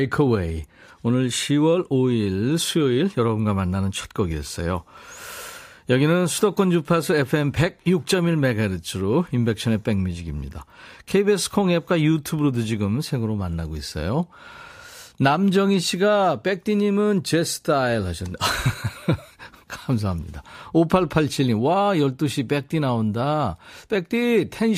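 No technical faults can be heard anywhere in the recording.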